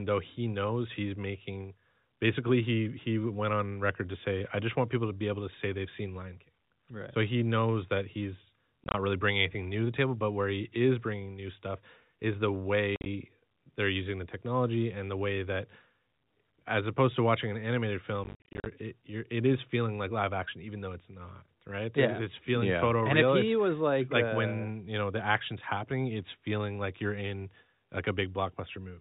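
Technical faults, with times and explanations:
8.84–8.94 s, 12.96–13.06 s and 18.24–18.66 s, packet loss filled with silence: the speech gets chopped by clusters of dead gaps, about 70 ms lost across 100 ms in the first, 80 ms across 100 ms in the second, and 250 ms scattered over 420 ms in the last. The longest single holes are 20 ms and 50 ms, which fits 10 ms packets going missing. Since the receiver drops in pure silence, each gap starts and stops abruptly. The narrowband telephone-style sound stays steady under it all.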